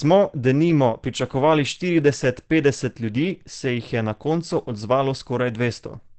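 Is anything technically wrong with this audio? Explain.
Yes. Opus compression throughout: the sound points to a low-rate speech-mode encode, likely near 16 kbps, which removes everything above 8.6 kHz and leaves the speech plainly muffled and hoarse.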